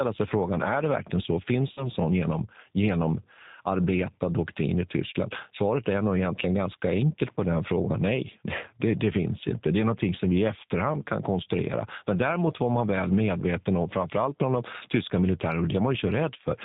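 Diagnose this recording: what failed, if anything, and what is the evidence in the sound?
The codec stage failed throughout. The speech has no content above 4 kHz and sounds plainly rough and synthetic. This points to a G.729 codec at 8 kbit/s. That coder rebuilds the voice from a filter, a pitch predictor and a few pulses per frame.

The network stage shows VoIP packet loss concealed by the speech codec, from 1.73 to 1.88 s, just before "sån genom genomarbetad doktrin". About 40 ms of audio is missing, which fits two lost packets. The decoder stretched its last pitch and filter into a fading sound. The voice stays weak until its state recovers.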